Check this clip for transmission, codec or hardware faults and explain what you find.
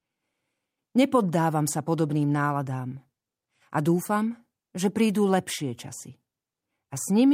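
Nothing faulty can be heard anywhere in this recording.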